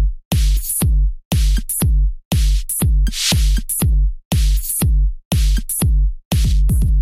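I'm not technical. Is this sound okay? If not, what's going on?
Yes, this sound is okay, and nothing is going on with it that needs fixing.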